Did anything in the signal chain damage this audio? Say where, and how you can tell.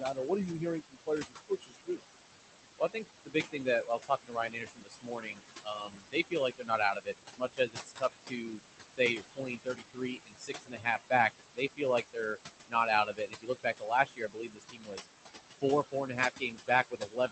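Yes. The damage is in the call processing stage, where a noise suppressor works on the room noise, which sits only about 6 dB below the speech. The noise suppressor artifacts run through the whole clip. It pulls the noise down by about 17 dB frame by frame, so the background sinks in pauses and swells back under speech.

The same processor also produces speech cut by the noise suppressor. It mistakes parts of the speech for noise and turns soft consonants and word endings down with the background, by up to about 22 dB. This happens at 0.0–2.0 s, 2.79–8.6 s, 8.92–11.12 s, 11.54–12.37 s and 12.68–15.06 s, and from 15.61 s to the end, where the drop is about 17 dB. Those sounds come out swallowed or faint.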